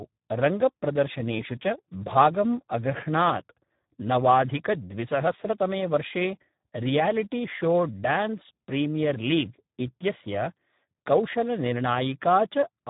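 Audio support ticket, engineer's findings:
Speex codec damage throughout: hoarse, buzzy, robotic speech, nothing above about 3.8 kHz. Starved CELP excitation, which fits a bitrate near 8 kbps. Unlike plain lowpass, voicing itself degrades.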